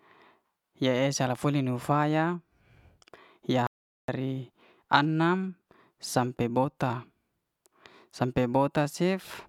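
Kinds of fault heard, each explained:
Playback stall: the speech just stops dead at about 3.67 s and the output sits in silence for roughly 0.42 s, until 4.08 s, before picking up again. It's a clean gap rather than a fade or a glitch, which points to the player having nothing to send out for that moment, likely because its buffer ran dry or its playback thread got held up, and then carrying on once data was flowing again.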